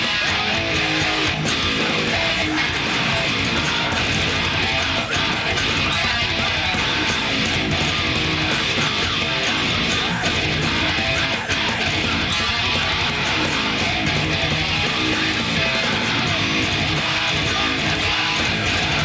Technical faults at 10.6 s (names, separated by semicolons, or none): none